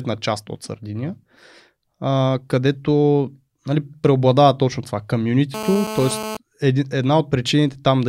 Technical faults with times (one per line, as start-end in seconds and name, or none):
5.54-6.37 GSM phone buzz